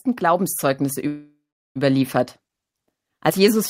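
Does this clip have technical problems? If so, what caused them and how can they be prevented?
Yes. Automatic gain rising occurs twice: the gain control judged the input too quiet and raised its gain, by about 5 dB from 0.18 to 2.19 s, and again from 3.34 s to the end. Speech and background noise swell together over each stretch. Setting the microphone level correctly at the source and limiting the gain control's range or speed would prevent these swells.

A call audio freeze runs from 1.07 to 1.78 s, likely caused by packets held up in transit until the jitter buffer ran dry. The receiver stretched the last sound into a fading buzz or hiss for about 0.68 s, including about 0.38 s of silence, then resumed where it stopped. Nothing is lost, but everything after arrives about 0.68 s later. A more stable network path or a deeper jitter buffer would prevent this.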